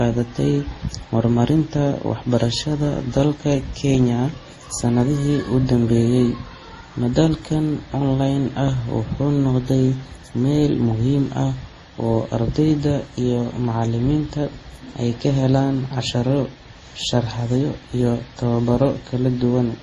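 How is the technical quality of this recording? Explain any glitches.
The recording has a persistent coding fault that runs for the whole clip. The speech is band-limited and carries layered compression artefacts from start to finish.

Transcoding between lossy codecs: there is nothing above 12 kHz, and the sound mixes the artefacts of several codecs. That combination likely comes from a chain of low-bitrate codecs, consistent with MP3, then Opus, then Vorbis at around 32 to 34 kbit/s. Each stage re-encodes the previous stage's errors and adds its own. The narrowest bandwidth persists, so the different artefacts are heard stacked together.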